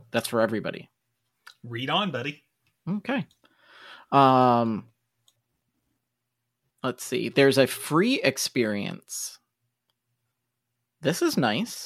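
A speech recording with nothing technically wrong with it.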